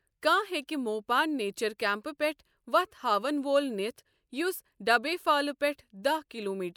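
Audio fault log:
No faults found anywhere in the speech.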